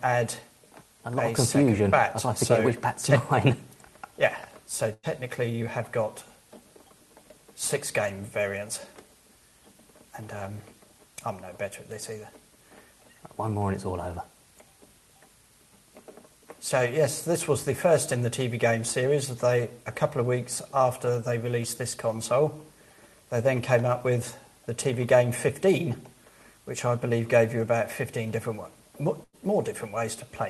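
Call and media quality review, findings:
Burst of packet loss, 4.93–5.06 s and 29.24–29.36 s; jitter buffer/concealment. Consecutive packets lost or late; receiver extends the last sound for about 95 ms, fading it, then resumes about 60 ms further on, skipping that stretch and shifting playout delay by about 35 ms.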